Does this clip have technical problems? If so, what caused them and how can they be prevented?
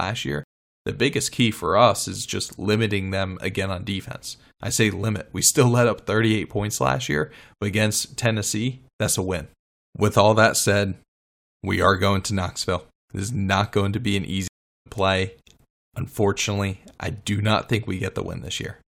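Yes. Two stream reconnects, at 0.44 to 0.83 s and 14.48 to 14.87 s: the connection dropped, went silent for about 0.39 s, then restarted the decoder and resumed roughly 0.3 s and 0.4 s later. A larger buffer and resuming the stream from the last received position would prevent these gaps and skips.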